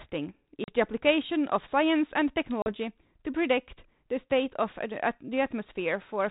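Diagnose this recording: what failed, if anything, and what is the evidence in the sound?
Packet loss on an ADPCM call, at the network stage: the speech drops into abrupt silent holes of about 40 ms at 0.64 s and 2.62 s, a couple of packets each. Afterward the speech returns slightly distorted, because the decoder's adaptive predictor and step size drifted from the sender's until they resynchronised.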